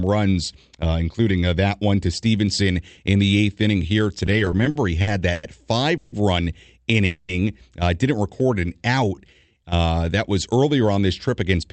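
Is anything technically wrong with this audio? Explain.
Yes, there are several playback faults from a call connection.

From 4.26 to 5.44 s, just after "the eighth inning here", the speech drags and stutters through repeated stalls (stutter). There are ten brief gaps, about 270 ms in all, the longest 100 ms, each filled by continuing the last sound while the jitter buffer waited for late packets. Nothing is lost.

At 5.97 to 6.13 s and 7.06 to 7.30 s there are call audio freezes. The sound hangs as a fading buzz for 150 ms and then 230 ms, never reaching silence, before resuming where it stopped. The likely cause is packets held up in transit, emptying the jitter buffer.

From 8.42 to 9.77 s, just before "that was earlier on", a jitter buffer slow-down drawns the speech out to about 84% speed at unchanged pitch. Repeated pitch periods add 224 ms to rebuild the buffer's reserve.

From 11.34 to 11.72 s, after "was earlier on this", a jitter buffer speed-up hurries the speech to 109% speed at the same pitch. 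The receiver trimmed roughly 40 ms of pitch periods to cut excess delay.

The top end stops around 8 kHz, which fits the Opus call path it passed through.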